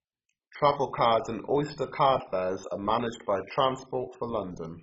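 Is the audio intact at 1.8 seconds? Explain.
No. Like the whole clip, 1.8 s has dull, gurgling, granular speech with nothing above 7.5 kHz, likely from MP2 compression at a very low bitrate switching off and coarsely quantising sub-bands.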